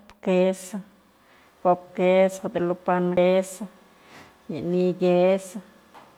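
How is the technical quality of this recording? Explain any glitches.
There's one glitch in this speech recording, a CD skip at 3.17 s. A knock or a flaw sent the laser onto another turn of the disc's spiral, so the player briefly mutes for a few milliseconds. You hear a small tick, then the speech resumes from a different spot.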